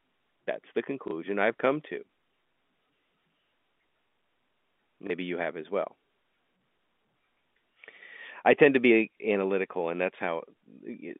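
Packet loss with the last packet repeated occurs at 1.08 s, just before "I've come to", and again at 5.07 s, just before "you have as well". Each time about 30 ms of audio went missing, which fits a single lost packet. The receiver filled the gap by replaying the preceding chunk, and each gap comes through as a small blip over the narrow telephone band.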